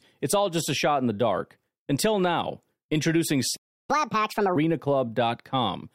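A speech recording with a playback stall followed by catch-up at higher speed. At 3.56 s the speech cuts off mid-flow and the output falls silent until 3.90 s, a gap of about 327 ms. The sound then resumes rather than skipping ahead, so nothing is lost, only delayed. This is most likely the player running out of buffered data, or its audio thread being blocked, and producing nothing until it recovered. Right after the gap, from 3.90 s to 4.56 s, the speech runs at 1.5 times normal speed and its pitch rises by about seven semitones, giving a hurried, high-pitched quality. This is the player resampling its backlog to recover the time lost in the stall. Speed and pitch both return to normal at 4.56 s, once the delay has been absorbed.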